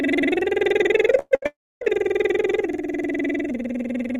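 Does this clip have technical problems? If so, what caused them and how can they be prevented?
Yes. Two bursts of packet loss hit the music. Consecutive packets were lost or arrived too late, so the receiver stretched the last sound and let it fade. At 1.19 to 1.34 s about 120 ms is missing, ending in a brief silence. At 1.35 to 1.45 s another 80 ms is gone. Larger jitter buffers and forward error correction would prevent this.

A long network dropout follows from 1.46 to 1.84 s, likely because the connection stopped delivering audio entirely. About 360 ms of music is lost. The concealed sound dies out quickly, leaving roughly 270 ms of silence before playback resumes further on. A more stable connection, or redundant transmission over a second path, would prevent it.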